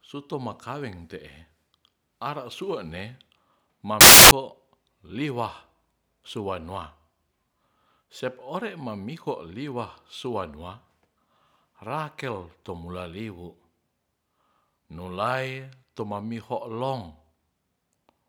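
From 4.01 to 4.31 s the speech gives way to loud, harsh broadband noise: samples built from the wrong bytes. The reader misassembled each value, so rapidly changing low bits became large amplitudes. A spectrogram shows energy filling the whole band; the waveform shows a dense, high-amplitude block.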